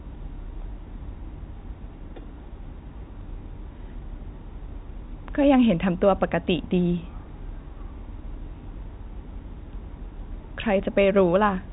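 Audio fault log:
No fault to log; the speech arrives through G.711 telephone coding with nothing above about 3.8 kHz, as that path normally gives.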